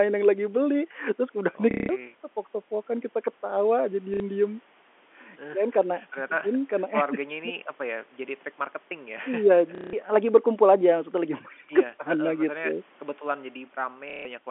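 At 1.71 to 1.89 s, 4.14 to 4.20 s, 9.75 to 9.93 s and 14.10 to 14.25 s the speech is hit by packet loss with the last packet repeated. The receiver replays the last audio it got until fresh data arrives. The replays don't follow the pitch, and the longer runs buzz at about 33 Hz, which fits 30 ms packets. Unlike a dropout, the gap isn't silent. It fills with a robotic stutter.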